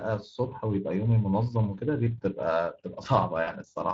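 Right from the start, the speech carries plainly audible Speex codec damage: a grainy, hoarse CELP texture that fits a Speex stream at roughly 20 kbps. Then from 3.43 to 3.50 s there's VoIP packet loss concealed by the speech codec. About 40 ms went missing, which fits two lost 20 ms frames. The decoder stretched the last sound out as it faded, and it stays weak just after.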